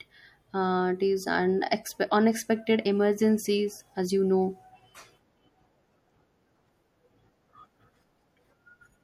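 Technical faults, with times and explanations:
Throughout, MP3 compression: a watery, swirly texture, likely from a low bitrate around 64 kbps that starves weak frequency lines.
2.85 s, compressed frames skipped: a brief smeared blip where about 50 ms of sound vanishes, as roughly two 24 ms frames were dropped before decoding.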